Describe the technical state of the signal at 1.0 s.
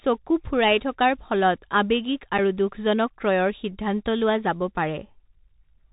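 Bluetooth CVSD headset codec at 1.0 s, present throughout: one-bit up/down steps with adapting size cap the speech near 4 kHz, roughening s sounds over a granular hiss.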